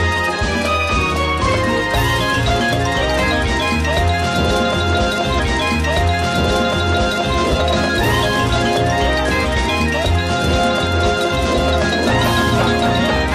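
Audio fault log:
5.34–7.34 s, stream segment repeated: a small blip, then 2.0 s of audio plays again, because the player fetched or queued the same segment twice.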